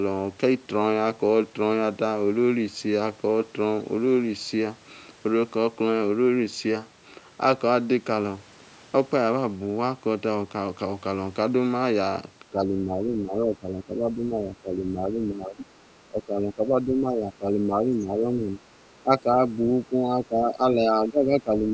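A speech recording whose last nine seconds or so are repeatedly pulled down: from 12.5 to 15.6 s, 16.09 to 18.61 s, and 19.03 s to the end, the talker dips by around 10 dB, and by roughly 15 dB in the final stretch. This is speech suppressed in double talk, likely the echo canceller ducking the talker while the far side also speaks. At 15.6 to 15.76 s a faint second voice, about 15 dB below the talker, slips through. This is the other side's voice leaking through, likely residual loudspeaker echo the canceller missed. It is a separate voice, not a repeat of the talker's own words. The call's microphone path passes nothing above 8 kHz.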